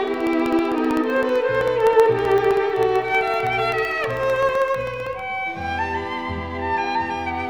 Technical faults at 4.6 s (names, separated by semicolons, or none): periodic USB or driver dropouts